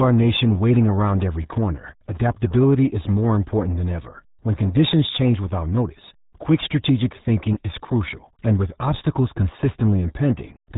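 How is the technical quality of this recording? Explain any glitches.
Pretty rough, honestly: the whole thing has gone through the RealAudio 14.4 codec, and it shows from start to finish. It's an old dial-up-era speech codec, and the damage sounds like it was squeezed to about 8 kbit/s. Everything above roughly 3.8 kHz is simply gone, so the speech comes across muffled and boxy, with no crispness on the consonants. On top of that, the heavy coding leaves a gargly, watery texture on the voice.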